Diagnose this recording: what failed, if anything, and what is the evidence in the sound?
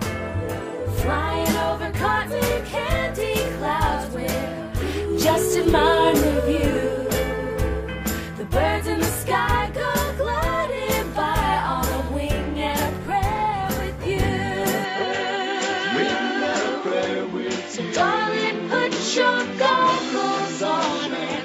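Input likely switched to a poorer device (device routing) at 14.84 s: the sound dulls abruptly, nothing above 7.6 kHz, faint new noise, no gap.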